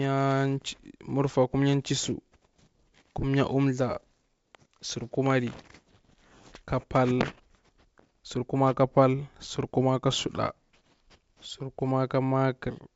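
No technical faults occur anywhere in this speech, which comes through G.722 wideband telephone coding at 64 kbit/s.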